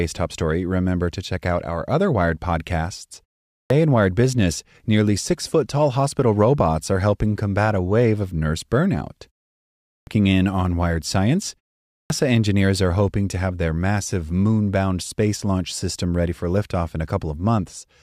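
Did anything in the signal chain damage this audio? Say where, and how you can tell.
Yes. The fault is a clipped start after a pause at 3.52 s, 9.91 s (before "in on") and 11.91 s (before "engineers are hoping to"). After gaps of 0.35 to 0.68 s, the playback device sleeps and wakes late, cutting the first 160 to 190 ms of sound.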